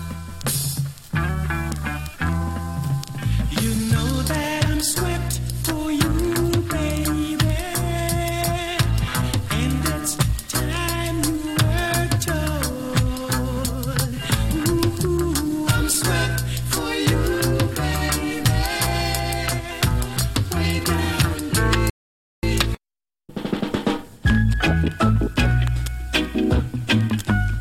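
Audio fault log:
21.90–22.43 s, rebuffering stall: playback runs dry and drops to silence for about half a second, then picks up exactly where it left off, nothing lost.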